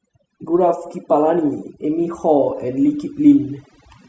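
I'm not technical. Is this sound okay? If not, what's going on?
No. Throughout, the background drops and breaks up into twinkling specks. This is overdone noise removal: a cleanup tool set too strong shut off quiet parts of the voice along with the noise.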